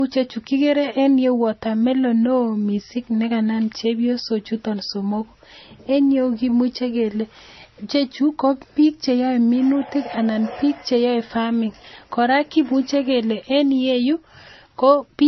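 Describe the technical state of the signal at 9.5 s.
At 9.5 s, as through the whole clip, the speech sounds like the result of likely transcoding between lossy codecs: nothing above 5.9 kHz, with smeared, swirly artefacts layered over a second, watery texture, fitting a low-rate MP3 re-encoded to Vorbis. Two distinct artefact types heard together separate it from a single codec pass.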